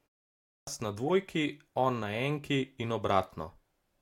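Clipped start after a pause, 0.44 to 0.67 s: after 0.44 s of silence, the output device seems to have needed time to wake, so about 230 ms of the first speech is lost. The speech bursts in abruptly, its opening sounds missing.

Corrupt frame decoded, 1.07 to 1.10 s: a damaged compressed frame, apparently just one, was decoded anyway, and misread gains or codes put energy in the wrong frequencies. It sounds like a short blip or chirp peaking around about -25 dBFS.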